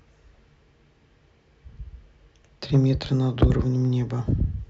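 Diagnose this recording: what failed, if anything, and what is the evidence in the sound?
Hard clipping occurs twice in the speech, briefly at 2.75 to 2.79 s and more heavily at 3.42 to 3.50 s. On both peaks the waveform runs into a fixed ceiling and is cut flat, driven about 3 dB past it in the first event and about 7 dB in the second. The flattened tops add high harmonics, heard as a short crackle and then a harsher burst of fuzz. The hard ceiling points to overload at the converter or at a fixed-point sample-format conversion.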